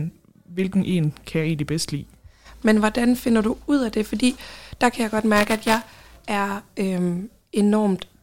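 From 5.36 to 6.16 s, after "der kan jeg godt", buffer tearing sets in. Writer and hardware pointers cross every period, splicing older audio into each buffer. The result is a 375 Hz robotic buzz, fitting a 128-sample buffer. Unlike dropouts, it leaves no silent gaps and is heard only under speech.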